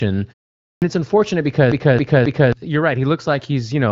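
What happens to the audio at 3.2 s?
Nothing goes wrong at 3.2 s; the audio there is intact, carried through the HD Voice wideband codec at its normal clarity with no dropout, glitch or distortion.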